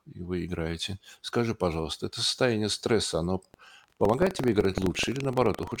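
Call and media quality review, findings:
Buffer tearing, 3.50 s to end, after "это состояние стресса оно": playback write and read pointers slipped, splicing a small slice of audio about 150 ms old into each period. Speech carries a 23.4 Hz robotic rattle, consistent with a 2048-sample buffer.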